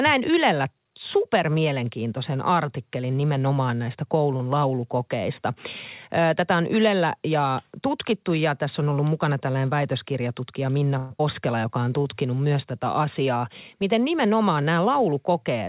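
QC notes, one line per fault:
10.98–11.12 s, call audio freeze. The speech stalls for about 122 ms while the receiver stretches the last sound into a fading buzz or hiss instead of dropping to silence. Nothing is lost. When audio resumes it picks up exactly where it stopped. The sound points to packets held up in transit, likely leaving the jitter buffer empty. The result is a short inserted gap that pushes everything after it later by the same amount.
11.18 s, skip ahead. Right after the freeze, playback jumps forward. Roughly 70 ms of speech is missing, and the two sides are joined with only a tiny bridging fill. A stretch of audio was discarded, in transit or by an overflowing jitter buffer, while later audio was already queued. The skip takes back only about 70 ms of the 122 ms the freeze inserted.
11.62–12.15 s, jitter buffer slow-down. Just before "myös tätä asiaa", the speech runs at about 88% speed with unchanged pitch. 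Sounds are drawn out. The receiver repeated single pitch periods and small pieces of pauses again and again, adding about 74 ms in total. It does this to rebuild a reserve when the buffer is running low or its target delay has gone up. The speech drags rather than stopping.
14.25–15.45 s, jitter buffer speed-up. Over about 1.2 s near the end, the speech runs at about 110% speed, still at the same pitch, and sounds hurried. The receiver cut out many short slices of one or a few pitch periods, roughly 150 ms altogether. This trims excess delay when more audio has built up in the buffer than it aims to hold. The rhythm tightens without any audible gap. Throughout, the G.711 A-law call path leaves nothing above 4 kHz.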